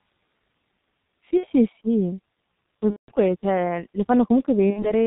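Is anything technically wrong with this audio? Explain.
Yes. The speech has two problems.

Throughout, the G.723.1 codec is audible. Nothing reaches above 4 kHz, so the speech is muffled. Its voice model updates slowly at a very low bitrate, which fits about 6 kbit/s. The result is a hoarse tone and smeared consonants.

There is also VoIP packet loss concealed by the speech codec, at 1.38 to 1.48 s, 2.91 to 3.11 s, and 4.71 to 4.92 s. The decoder filled each gap by repeating its last pitch and filter at falling gain. The sound smears into a fading buzz or coloured noise. The middle gap is the longest, at about 180 ms against 60 ms for the others.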